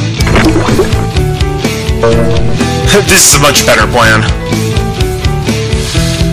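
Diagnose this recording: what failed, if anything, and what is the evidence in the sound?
Hard clipping runs through the whole recording: the signal is driven about 24 dB past what a converter or fixed-point stage can pass, so a sizeable share of samples is sheared flat. Every loud moment carries harsh fuzz, not the rounder thickening of gentler analogue saturation.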